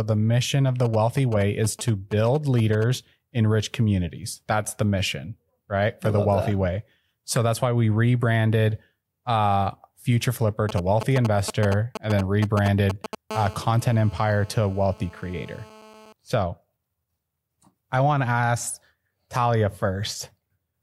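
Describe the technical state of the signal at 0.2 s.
Nothing is wrong with the signal at 0.2 s; the audio is intact at that point, with no dropout, clipping, distortion or other fault to be heard.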